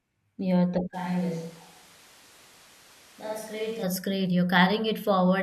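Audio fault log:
0.95–3.82 s, switch to a distant microphone: the speech abruptly turns roomy and hollow, loses low end, and drops about 10 dB, with background noise rising to around 20 dB below the speech. The likely cause is the close microphone's signal failing, leaving a far-off pickup that hears more room than source. On a waveform the envelope steps down at the start and back up at the end. A spectrogram shows thinned bass, reverberant smearing and a raised noise floor filling the gaps.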